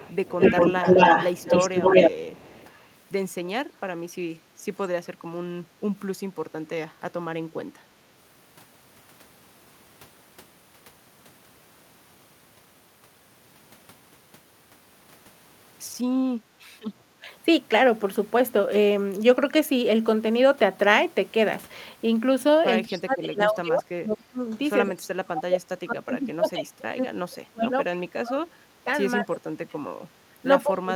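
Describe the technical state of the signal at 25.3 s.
At 25.3 s the speech sits inside a stretch of speech suppressed in double talk, running from 22.86 s to the end at 30.96 s. It dips and thins, falling as deep as about 30 dB. Likely cause: an echo canceller mistaking overlapping talk for echo.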